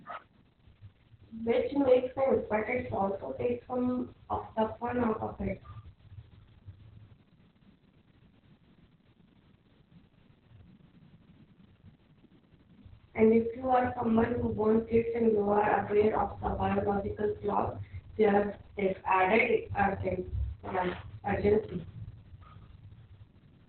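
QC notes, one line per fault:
Throughout, Opus voice compression: the speech was squeezed through the SILK linear-prediction coder at a very low rate, consistent with roughly 6 kbps and long 60 ms frames, so the codec fell back to narrowband and coded the excitation crudely. Nothing survives above 4.3 kHz, leaving the speech muffled and telephone-thin, while the coarse excitation adds a hoarse, buzzy, slightly robotic edge. The damage is heavy and continuous across the whole clip.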